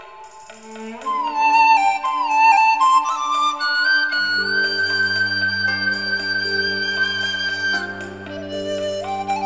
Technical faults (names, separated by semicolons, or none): none